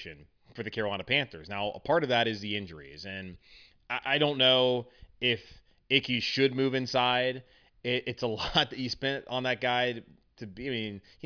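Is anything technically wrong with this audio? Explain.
No, the speech signal is technically intact, with nothing in it that points to a fault in how it was captured, processed or delivered.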